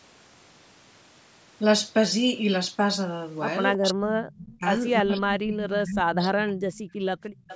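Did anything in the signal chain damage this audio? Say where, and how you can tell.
Yes. At the call-processing stage, speech was suppressed in double talk, likely because the echo canceller could not tell this talker from loudspeaker echo while both sides spoke. The speech is turned down from 3.77 to 4.63 s and from 5.02 to 6.77 s, sinking by roughly 30 to 35 dB at its deepest.

An echo leak appears from 7.35 s to the end of the clip, likely where the far end's echo canceller left a residue that was sent back. A faint delayed copy of the speech trails it by 329 ms, about 20 dB below the direct sound.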